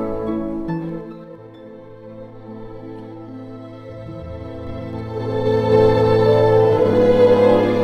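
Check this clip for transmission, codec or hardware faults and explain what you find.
Two stretches of zipper noise stand out. From 0.84 to 1.49 s the level drops by around 15 dB with a fast ticking, about ten clicks a second. From 4.27 to 5.76 s it climbs back by around 15 dB with slower ticks, roughly four a second. Each tick is a 3 dB jump in gain applied all at once rather than ramped, so every step leaves a small discontinuity in the waveform.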